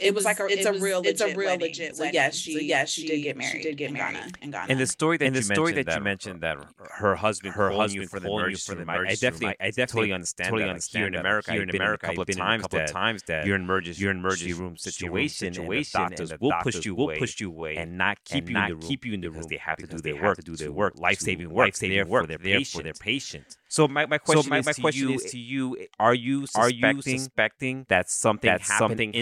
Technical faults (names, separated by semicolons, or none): doubled audio track